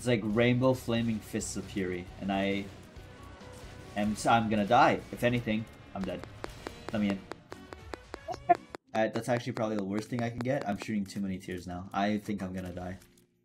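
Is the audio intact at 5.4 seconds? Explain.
Yes, the audio is intact at 5.4 seconds, with no dropout, click, distortion or other fault audible at that moment.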